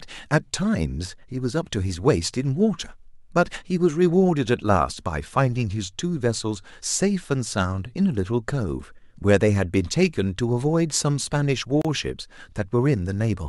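A speech clip with one gap at a join of encoded pieces at 11.82 to 11.85 s. A gap of about 32 ms cuts in. Unremoved encoder padding at the seam leaves it.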